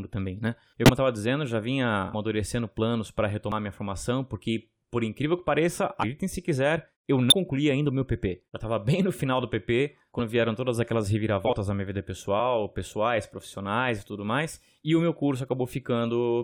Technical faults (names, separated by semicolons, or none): compressed frames skipped